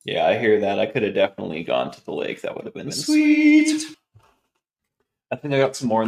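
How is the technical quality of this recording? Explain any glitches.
The recording has one glitch. From 2.86 to 3.94 s, a doubled audio track appears: a second path, likely, feeds the same audio again, trailing around a tenth of a second behind and roughly 5 dB quieter, producing a dry, abruptly switched echo.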